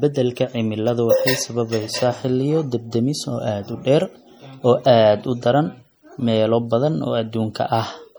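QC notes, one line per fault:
Throughout, MP3 compression: the speech has a plainly audible watery, swirling texture as weak frequency lines drop in and out between frames, likely from a low bitrate near 48 kbps. Unlike noise reduction, the treble still extends to about 21.6 kHz.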